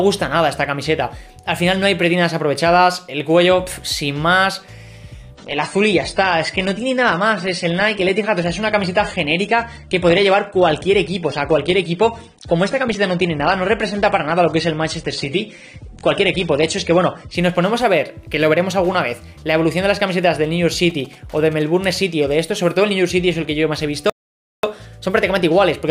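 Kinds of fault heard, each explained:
Adaptive stream at a lower bitrate: from 5.35 to 17.35 s the top end disappears abruptly, with nothing above 9.8 kHz and more codec artefacts, which fits a step down to around 32 kbit/s AAC. Unlike a dropout, the sound never breaks, and full quality returns just as suddenly.
GSM signalling bursts: from 20.90 to 21.62 s a brief galloping run of short buzzes sits about 25 dB below the programme, buzzing at roughly 217 Hz. This is radio interference picked up by the audio circuit, not hum, which would be steady rather than clustered in short bursts.
Playback stall: at 24.10 s the sound halts mid-flow into silence for 0.54 s, then carries on. The likely cause is the player running short of data or its thread being blocked. Unlike a bitrate drop, this is a clear gap, not a change in tone.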